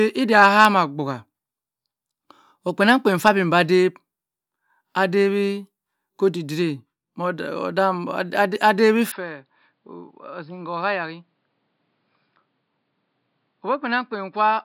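From 9.12 s speech dulls and drops about 10 dB, spectrogram content ending at 5.2 kHz, likely from an input switched to a poorer device.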